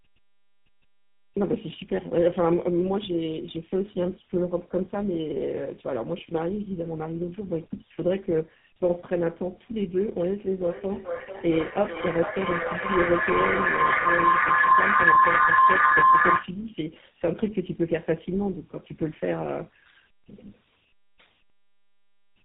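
Tandem speech coding runs through the whole recording. The speech passed through two low-rate speech coders in a row, with a G.711 mu-law stage between them, and each coder had to work on the degraded output of the one before. The character fits a G.729A coder followed by GSM full rate. The damage compounds, so the speech sounds rough, muffled and warbly, and nothing is left above 3.8 kHz.

Feedback howl runs from 10.57 to 16.59 s. A microphone and loudspeaker on the same call formed a loop that gained level on each pass, so the sound built up instead of dying away. The loop narrowed to the frequencies it favoured, leaving a tone around 1 kHz, with the repeats coming roughly every 0.4 s. At its peak the howl reaches about 8 dB above the speech, and then it stops.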